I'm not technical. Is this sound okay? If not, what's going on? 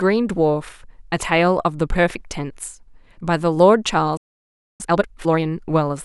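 No. At 4.17 s the speech suddenly cuts out and stays silent for about 0.6 seconds, until 4.80 s. This is a playback stall: the player most likely ran short of incoming data, or was briefly blocked, so it had nothing to play.

From 4.80 s to 5.42 s the speech comes back rushed, running at twice normal speed but with no chipmunk pitch. This is time-compressed catch-up: the player trims tiny slices and blends the joins to make up the time it lost.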